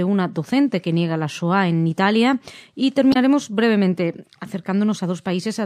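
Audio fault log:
3.10–3.16 s, damaged data in a compressed stream: a brief glitch, as the decoder misreads corrupted frames and resyncs to the next header.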